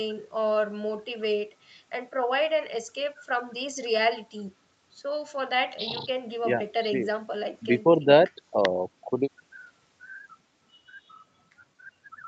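No technical faults can be heard anywhere in this speech recording. It has passed through a call's microphone processing and codec, which trim the lowest bass and leave nothing above about 8 kHz, as that path normally does.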